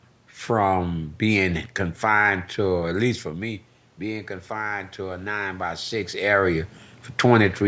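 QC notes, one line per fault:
2.77–6.00 s, automatic gain rising: after "from being confined" the talker moves back and the input falls by about 12 dB. The gain then climbs slowly by about 6 dB, lifting room noise along with the voice, unlike a plain talker move.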